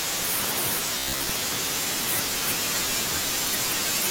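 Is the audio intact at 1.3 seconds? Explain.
No, 1.3 s falls right at the tail of a stretch of robotic sound from repeated short buffers, running 0.98 to 1.31 s. The speech becomes a stiff, metallic buzz near 66.8 Hz, likely from a roughly 15 ms chunk being looped while most of the real audio is skipped.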